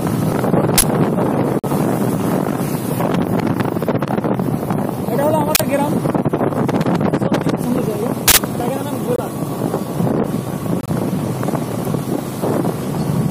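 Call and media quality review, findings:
Uninitialised buffer: loud bursts of harsh digital noise at 0.78–0.82 s, 5.55–5.60 s and 8.28–8.37 s. Each lasts 46 ms, except the last, which lasts 93 ms. That fits playback of 2048-sample blocks, and 4096 samples for the longer one. Component: output buffer handling. Mechanism: a block is sent out before anything is written into it, so stale memory contents play as samples.

Corrupt frame muted: abrupt holes of silence at 1.59–1.66 s (64 ms), 9.16–9.20 s (44 ms) and 10.81–10.89 s (82 ms). Component: decoder and concealment path. Mechanism: the decoder rejects damaged compressed frames. The player fills their slots with silence, so timing holds and the gap stays in place. Hard onset, no skip.

Dropped buffer (overrun): jump in the sound at 4.73 s, 7.64 s and 8.60 s. About 10 ms of audio is missing each time, with no gap. Component: capture or playback thread, likely a late read letting hardware overwrite a buffer. 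Mechanism: the lost stretch is discarded, and the audio on either side is butted together.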